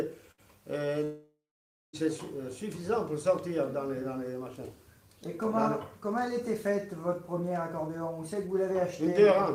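A burst of packet loss hits at 0.31 to 0.41 s. The last sound is stretched into a held buzz or hiss that fades, and about 60 ms of the audio is skipped. A waveform shows a smooth decaying repetition, and a spectrogram shows frozen, blurred bands that then jump. From 1.04 to 1.96 s the audio drops out for nearly a second, most likely a long network dropout. A fading continuation of the last sound gives way to about 580 ms of near-silence, a flat waveform and an empty spectrogram, before the audio resumes with about 0.9 s missing.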